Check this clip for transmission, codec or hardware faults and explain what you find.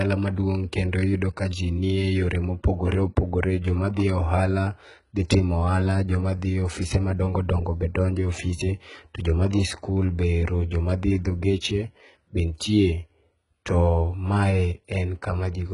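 One fault runs through the whole speech clip: the sound shows HE-AAC compression damage, heavy enough to fit a very low bitrate around 12 kbps. The treble is likely rebuilt by spectral band replication, with lower bands copied upward under a coarse envelope instead of being coded, so its harmonics don't align with those below. S sounds come out gritty and lispy, with a metallic sheen. On a spectrogram, the upper band looks like a smeared, blocky copy of the lower one and cuts off entirely at 11 kHz.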